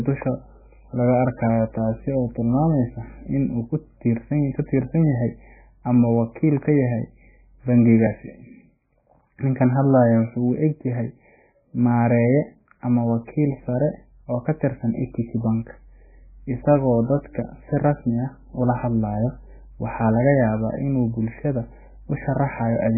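Throughout the speech, nothing is present above 2.5 kHz, and the remaining band is heavily watery and swirly, with smeared consonant onsets. This is likely MP3 compression at a very starved bitrate, around 10 kbps, where the encoder cuts the treble and toggles weak frequency lines between frames.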